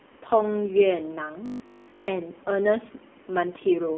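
From the first moment to the end, the speech carries the AMR narrowband mobile codec sound: nothing passes above 3.5 kHz and the line is confined to roughly 200 Hz to 3.5 kHz, so sibilants go dull and muffled. The codec damage is heavy, with a buzzy, synthetic edge that fits a low rate around 5.9 kbps. Unlike simple low-pass filtering, this rebuilds the voice from a vocal-tract model, which creates artificial texture rather than just removing treble.

From 1.46 to 2.08 s the speech turns into a rigid, metallic drone fixed at 50 Hz. This is robotic sound from repeated short buffers, likely caused by new audio arriving too late, so the playback repeats a 20 ms stretch over and over while the real audio in that gap is skipped. Essentially all of this span is repetition. What separates it from the codec's buzziness is the steady buzz at a fixed rate, which follows the talker only roughly.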